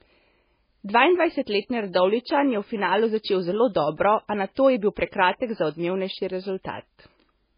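From start to finish, the speech has nothing above 5 kHz, a hard ceiling that leaves sibilants dull and the top end empty. The sound is smeared and watery in the way of a very low-bitrate MP3, likely low-bitrate audio saved at a high bitrate: a 16 kbit/s encode later wrapped at 192 kbit/s. The larger second file cannot bring back what the first encode discarded, so the cut-off and the artefacts remain.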